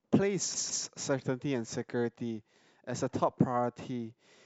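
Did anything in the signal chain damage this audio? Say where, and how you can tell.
Yes: repeated frames at the codec or storage stage, 0.54 to 0.85 s. A 157 ms block plays twice more, heard as a stutter.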